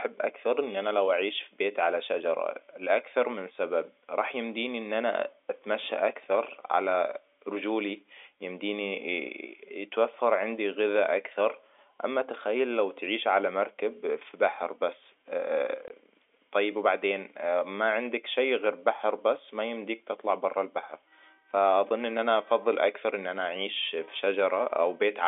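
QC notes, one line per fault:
15.88 s, packet loss filled with silence: a 20 ms dropout cuts the speech, consistent with one lost packet replaced by silence. On the waveform it shows as a flat gap, and on the spectrogram as a blank column.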